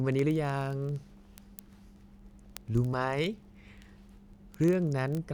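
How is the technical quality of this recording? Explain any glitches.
The recording is marred throughout by a fast, steady ticking. From 0.12 s to 5.31 s, word clock ticks come roughly every 20 ms, around 200 in all. The receiving device's clock runs about 0.1% off the sender's, so at each slip a sample is dropped or repeated, producing a sharp click.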